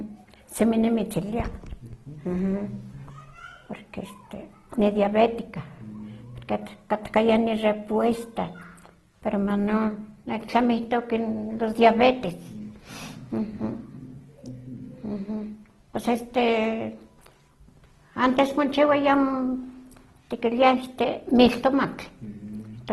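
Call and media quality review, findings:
Opus compression, likely low-bitrate CELT music mode, throughout: speech grainy, rough and noisy, nothing above 12.1 kHz, plainly audible damage consistent with about 16 kbps.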